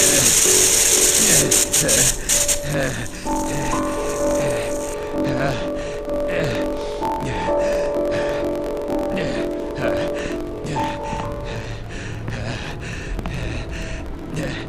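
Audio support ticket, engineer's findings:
Steady buzz at 45.9 Hz throughout, audio running 1.07 times fast at roughly normal pitch. Block size mismatch (truncated) between two buffer stages. Upstream writes longer blocks, consistent with 1024-sample writes, and downstream reads fewer and discards each block's tail. The splice at every block boundary gives the buzz, and the dropped tails give the speed-up.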